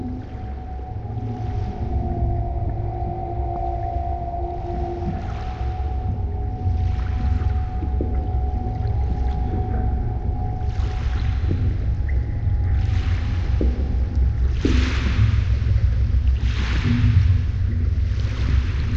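At 3.56 s, compressed frames are skipped. About one frame of the encoded audio never reaches the output. It was either missing from the stream or rejected by the decoder as damaged. The sound jumps forward by roughly 30 ms, which fits a frame length near 26 ms. Neighbouring frames overlap, so the join is not a sharp click. It is a brief smeared blip, a tiny stumble where a sliver of sound disappears.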